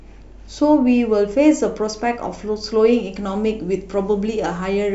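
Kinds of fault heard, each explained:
pre-emphasis left on: from 2.93 s to the end, treble that was lifted for transmission is never cut back, so the speech turns thin and hissy, about 11 dB up at 10 kHz. The rising shelf fits the FM 50 µs curve rather than a plain treble boost.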